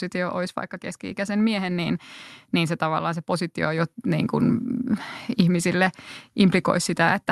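At 3.78 s, just after "se tavallaan se positio" and before "niin kuin", the microphone volume is stepped up. The call software raised the input gain in one jump of about 4 dB. Speech and background noise both get louder at once, mid-phrase.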